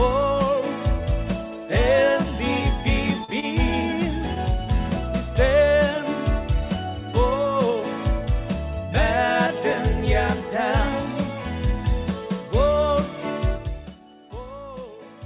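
Short concealed packet loss at 3.24 to 3.31 s: about 40 ms of audio never reached the decoder in time. The receiver bridged the hole by extending the preceding sound, then blended back into the real signal. This leaves a brief smear or wobble where a short sound may simply vanish.

A short stall from a late packet follows at 3.40 to 3.46 s. A packet arrived late and the jitter buffer ran dry, so the receiver held the last sound for about 27 ms until it came. Playback then resumed where it left off, with nothing lost. It is heard as a momentary drawn-out moment with a faint buzz or dip, in audio that is band-limited to 4 kHz by the telephone-grade call path.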